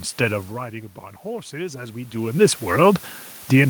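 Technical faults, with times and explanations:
Throughout, low bit depth with dither: a steady, even hiss about 25 dB under the speech, with no distortion, because dithered rounding to 7 bits turns error into white noise.
1.23 to 2.25 s, automatic gain rising: speech and room noise swell together by 5 dB as the gain control slowly lifts its gain after the input dropped about 13 dB.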